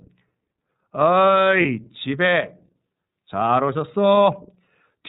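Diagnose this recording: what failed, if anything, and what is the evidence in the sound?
The failure is at the codec stage: the speech has passed through the iLBC codec and its damage is plainly audible. The voice sounds clear but rough and slightly synthetic throughout. A spectrogram would show a hard ceiling with no energy above 4 kHz, marking a narrowband path. The coarse texture fits the 30 ms frame mode at about 13.33 kbps, where each frame's excitation is coded independently and fine detail is sacrificed.

At 1.62 to 1.65 s, the network stage dropped packets, producing lost iLBC frames. The 30 ms gap fits a single missing frame. The decoder concealed it by repeating the last pitch cycle mixed with noise, so the moment sounds like a brief held, buzzy vowel. The waveform would show repeated periods, and the spectrogram a short stretch of frozen, smeared harmonics. Because iLBC frames stand alone, normal speech resumes immediately afterwards.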